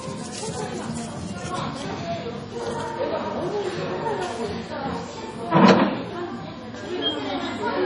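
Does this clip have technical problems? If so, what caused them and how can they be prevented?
Yes. Throughout, the sound is watery and swirly, with nothing above 10.5 kHz and smeared attacks. The likely cause is heavy MP3 compression: starved of bits, the encoder cut the treble and let weak frequency lines flicker on and off between frames, which fits a rate near 32 kbps. Prevent it by encoding at a much higher bitrate or keeping a lossless copy.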